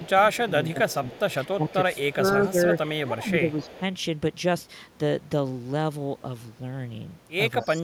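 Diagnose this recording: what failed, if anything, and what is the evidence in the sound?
The call processing stage failed in two linked ways. An echo leak appears at 0.0 to 0.1 s, 0.49 to 2.35 s, 3.51 to 3.8 s and 7.62 to 7.68 s: a faint second copy of the speech trails it by a fixed 243 ms, about 25 dB down, rising to about 20 dB down near 3.5 s. The likely cause is a far-end loudspeaker echo canceller that left residue. Room reverberation would smear continuously from zero delay rather than repeat as a discrete late copy.

Speech suppressed in double talk shows as dips of up to roughly 10 dB at 0.0 to 1.23 s, 1.56 to 2.58 s, 3.04 to 3.82 s and from 7.62 s to the end, totalling a few hundred milliseconds per stretch. These dips cluster where the echo overlaps the speech, which likely shows the canceller ducking everything it could not separate. Packet loss would instead leave abrupt gaps unrelated to the echo, and automatic gain control would ride the level smoothly without tracking it.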